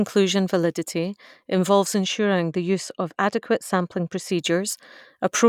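From 2.05 s to 4.29 s, right after "validity involves", the speech turns dull and muffled: de-emphasis applied wrongly. A treble cut meant to reverse pre-emphasis has been applied where none existed or applied twice, tilting the response down by about 11 dB at 10 kHz relative to 1 kHz. Unlike a low-pass filter, there is no sharp cutoff; the loss rises gradually with frequency, so sibilance and upper harmonics soften together rather than vanishing abruptly.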